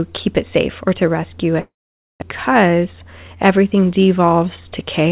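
Right after "safe or to rescue", from 1.60 to 2.24 s, the sound fades into a decaying buzz or hiss and then silence, likely a long network dropout: a spectrogram gap, about 400 ms lost.

From 2.52 to 3.86 s a jitter buffer speed-up trims pitch periods to play about 14% faster, removing roughly 0.2 s. Pitch stays level while the waveform looks compressed in time. Above it all, nothing passes 4 kHz, which fits a 64 kbps G.711 call path.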